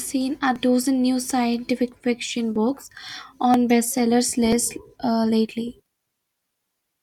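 A speech clip with a click or tiny skip about once per second, at 0.56–0.58, 1.54–1.56, 2.56–2.58, 3.54–3.57 and 4.53–4.55 s. Each is an overlap between stream segments. The audio arrives in 1.0 s segments whose time stamps overlap. The player trims the overlap, but that sound was never duplicated. About 22 to 26 ms of real audio is lost at each join, and the waveform jumps.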